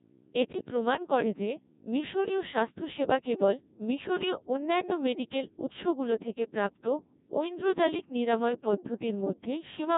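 Speech heard through the Codec 2 vocoder throughout: robotic, buzzy sine-wave resynthesis with nothing above 3.8 kHz, heavy damage consistent with roughly 1.6 kbit/s operation.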